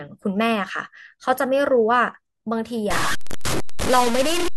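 From 2.91 s to the end at 4.56 s, the speech turns harsh and grainy, the distortion tracking every syllable, with noise only about 5 dB below the signal and quiet parts sputtering or dropping out. The likely cause is low bit depth without dither, consistent with truncation to roughly 3 bits.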